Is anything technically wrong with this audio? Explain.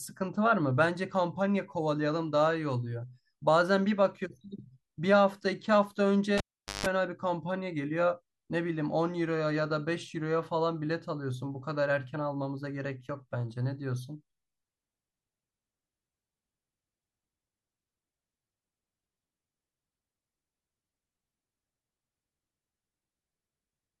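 Yes. At 6.38 s a live cable gets pulled and plugged in: a pop, roughly 430 ms unplugged, including about 160 ms of 50 Hz mains buzz while only the tip makes contact, and another pop as the sound comes back at 6.86 s.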